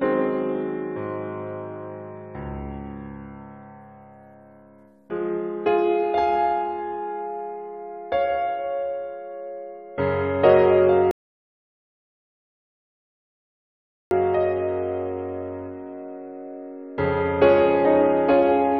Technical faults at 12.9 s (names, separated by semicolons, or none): rebuffering stall